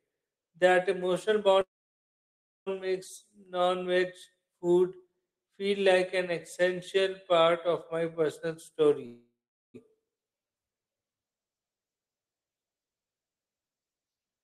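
Speech that twice stops dead and then carries on: from 1.61 to 2.68 s the last sound smears into a short fading buzz, then about a second of silence, and from 9.06 to 9.76 s the same happens with 0.43 s of silence. Each call audio freeze likely comes from packets stalling in transit and the jitter buffer running dry. Nothing is lost when the audio resumes, but each pause adds delay, 1.05 s and then 0.68 s.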